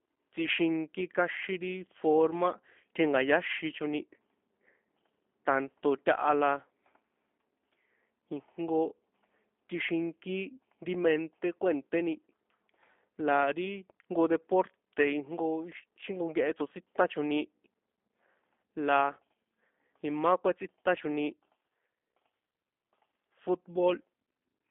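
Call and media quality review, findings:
G.729 codec damage, whole clip. Speech band-limited to roughly 250 Hz–3.5 kHz, nothing above. Rough, buzzy, slightly synthetic timbre from pulse-based excitation and LPC resynthesis every 10 ms frame; consistent with G.729A at 8 kbit/s on the voice leg.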